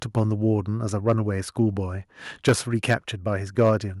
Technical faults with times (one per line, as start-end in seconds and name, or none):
2.47-2.53 microphone overload
2.49 microphone volume stepped down
2.89-2.94 microphone overload
3.58-3.69 microphone overload